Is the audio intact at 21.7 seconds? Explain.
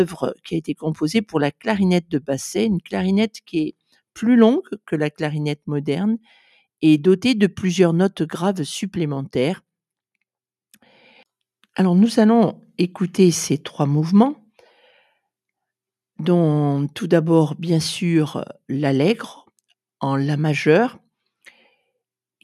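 Yes, at 21.7 seconds the audio is intact, with nothing at that moment breaking, distorting or interrupting the sound.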